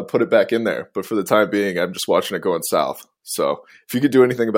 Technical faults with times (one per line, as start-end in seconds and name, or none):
none